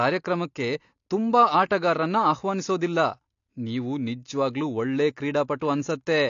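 Low-bitrate AAC compression runs through the whole recording, likely an AAC-LC encoder working at a rate that fits about 32 kbps. With too few bits, the encoder discards everything above 7.1 kHz and quantises the remaining spectrum coarsely. The damage is plainly audible: the speech sounds dull and muffled, sibilants lose their edge and turn smeared and fizzy, and sustained sounds take on an unsteady, warbling texture.

Pre-echo appears at about 5.6 s, right after "ನೀವು ನಿಜ್ವಾಗ್ಲೂ ಒಳ್ಳೆ". A sharp attack fell late in a transform block, so the quantisation noise sized for that loud onset was spread across the quiet moment before it as well. This leaks roughly 17 ms of hiss ahead of the attack, which makes the onset sound softened and blurred instead of crisp.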